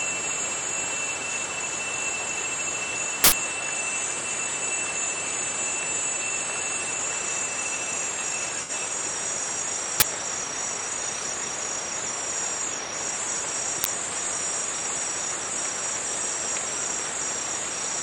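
Uninitialised buffer, 3.24 to 3.32 s: for about 80 ms the playback path sends out a block of memory that was never filled with audio. Whatever values were left in that memory are treated as samples, so the sound is replaced by a sudden, loud burst of harsh digital noise. It has no relation to the surrounding material and cuts in and out abruptly at the block edges.

AAC frame loss with concealment, 8.62 to 8.70 s: a stretch of about 64 ms goes missing, which fits roughly three lost AAC frames. The decoder fills the gap by reusing the last good spectrum rather than leaving a hole. Because it is rebuilding the signal instead of decoding real data, this short patch sounds smeared and noisy, a brief blurred moment before the normal sound resumes.

Uninitialised buffer again, 10.00 to 10.02 s and 13.84 to 13.86 s: each time a block of about 20 ms is played before any audio has been written into it. 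The result is a short, loud blast of digital garbage, much briefer than the one at 3.24 s, that replaces the material like a sharp crackling hit.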